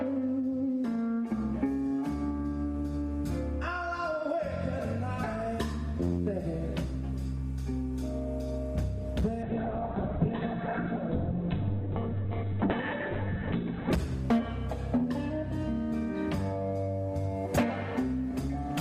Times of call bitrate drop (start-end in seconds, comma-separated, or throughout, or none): 9.43-13.98